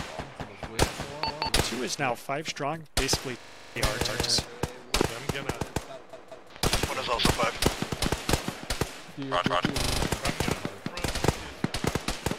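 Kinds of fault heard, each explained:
Repeated buffer: playback ran short of fresh audio, so the device played its last buffer over again. About 186 ms of sound, which fits an 8192-sample buffer, plays twice with a hard join at 1.30 s, 4.09 s and 9.47 s. At 6.13 s it plays three times. Each time the result is a distinct stutter, and the audio that should have followed, around a fifth of a second per repeat, is lost.
System hang loop: the host or driver stalled while the audio hardware kept cycling through the same ring buffer, so one 40 ms slice loops exactly. At this length the loop repeats 25 times a second, a rate heard as a rough buzz rather than separate repeats. It runs from 3.40 to 3.76 s, with nine passes, and again from 9.80 to 10.00 s, with five passes, and the sound that should have played there is lost.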